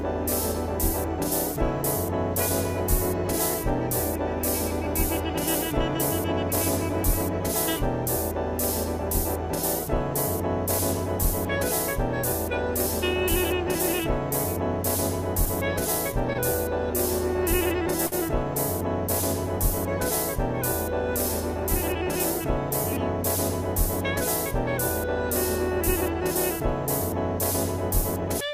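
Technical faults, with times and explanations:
16.33–16.37 s and 18.07–18.14 s, short stall from a late packet: each time, a packet arrived after it was due and the jitter buffer ran dry, so the receiver held the last bit of sound, for about 18 ms and then about 51 ms, until the data came in. It then resumed from the same point, so nothing is skipped. This is what separates it from a lost-packet dropout: the sound is briefly drawn out with a faint buzz or dip, and everything afterwards sits later by the held amount.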